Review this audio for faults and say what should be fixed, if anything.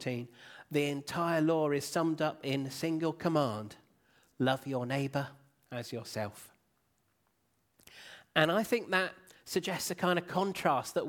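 Nothing needs fixing, as the recording shows no audible technical faults anywhere in the signal.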